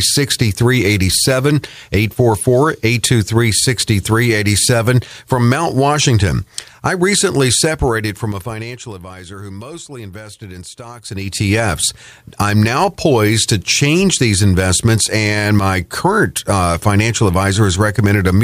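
From 7.72 to 9.04 s, after "I recently", zipper noise: the level drops by roughly 20 dB in 2 dB steps, around ten per second, each a small click. It climbs back similarly, twice as fast, from 10.96 to 11.52 s, after "who mostly invested in". Unlike a smooth fade, the level moves with audible ticking.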